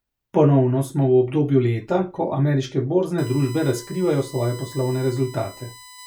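A speech clip that picks up USB whine at 3.18 s, a steady 1 kHz tone about 20 dB under the speech, running to the end, from the bus's 1 ms frame current leaking in.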